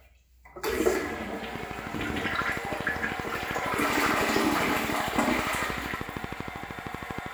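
From 1.56 s to 7.27 s a steady ticking runs over the audio, with sharp, near-identical clicks at a regular rate of 12.8 per second, around seventy in all. Each click stands out roughly 10 dB above the sound beneath it. This train of clicks is likely a repeating pulse from nearby electrical equipment or a faulty connection or power supply, injecting the same spike at a fixed pace.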